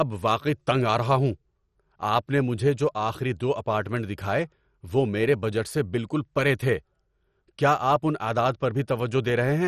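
Throughout the speech, the coding is likely MP2 compression starved of bits, consistent with a rate near 56 kbps, so upper sub-bands drop out and the remaining bands are coarsely quantised. Nothing survives above 13.8 kHz, and the sound is dull, with heavy gurgling, granular distortion.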